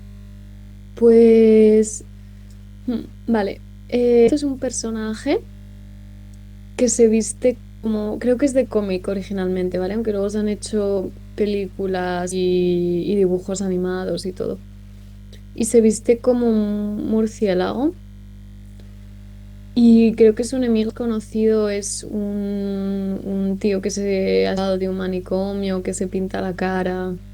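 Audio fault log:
Throughout, mains hum: power-line current is leaking into the signal path, probably through a ground loop or nearby transformer. It adds a steady 50 Hz tone with low harmonics, sitting only about 20 dB below the speech and audible through every pause.
Throughout, low bit depth without dither: the samples are likely being rounded to very few levels with no dither, which fits roughly 9-bit resolution. The rounding error tracks the speech, giving grainy distortion about 40 dB down that roughens quiet syllables.
4.27–4.34, 7.83–7.85, 10.97, 12.31–12.36, 20.89–20.92 and 24.57–24.61, compressed frames skipped: runs of 20 ms frames are not decoded, so the audio jumps ahead by about 300 ms each time, and by about 70 ms at 7.83.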